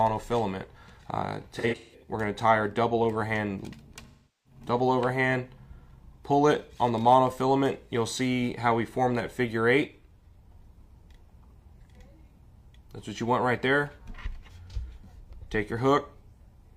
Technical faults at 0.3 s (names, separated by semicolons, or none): none